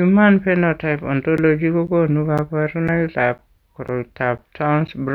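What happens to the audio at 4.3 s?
Periodic USB or driver dropouts, running from 1.37 to 4.88 s: roughly every 0.5 s a blocked driver drops about 10 ms of speech to silence, heard as regular ticks.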